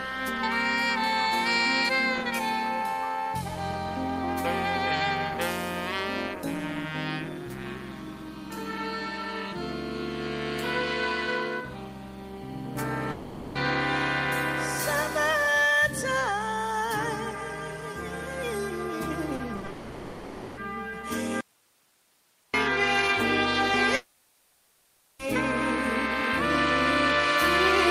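The audio breaks up several times from about 13 s on, in three distinct ways. At 13.11–13.57 s, 19.69–20.59 s and 23.95–25.21 s the sound is carried on as a fading synthetic buzz or hiss for the whole gap, about 0.44 s, 0.88 s and 1.24 s respectively, and then resumes with that stretch simply missing. These are long network dropouts, likely whole runs of packets that never arrived. The receiver's concealment stretches the last sound across the hole, so the gaps never fall to true silence. Just before the second of them, from 19.35 to 19.69 s, the sound turns choppy. This is repeated packet loss: four short holes, the longest about 40 ms, patched one after another, so roughly a third of that 0.34 s is made-up fill. It differs from the long dropouts because the sound keeps returning between the brief holes instead of being replaced by one continuous fade. From 21.41 to 22.54 s the signal cuts off abruptly and leaves only a faint hiss, roughly 40 dB below normal level, for about 1.1 s. 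This is an audio dropout to a faint residue. The path after the break likely stayed live but nothing was fed into it, so there is no concealment buzz or tail from the preceding sound, just a sudden, flat floor of noise.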